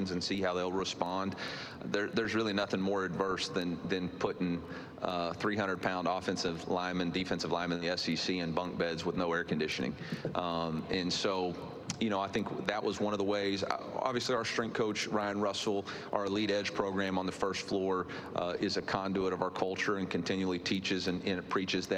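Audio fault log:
7.75 to 7.84 s, burst of packet loss. A short run of audio packets never arrived in time. The receiver stretched the last sound for 58 ms and faded it down. Playback then resumes with 60 ms of the sound simply gone.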